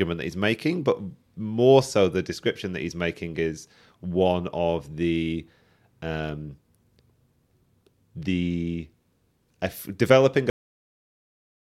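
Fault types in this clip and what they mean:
cut-off end: the final buffers never reached the output, so the speech halts mid-sound at 10.50 s, just after "uh developing", then sits in dead digital silence for the last 1.2 s. Unlike a dropout, nothing resumes, and there is no decay or fade.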